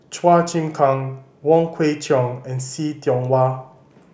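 Recorded speech, with no technical fault to be heard anywhere in it. There is nothing here to time or trace back to a cause.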